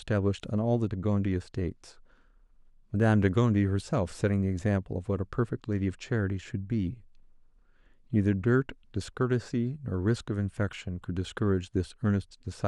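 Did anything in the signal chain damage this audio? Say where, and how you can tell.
No, nothing in the signal chain damaged this audio.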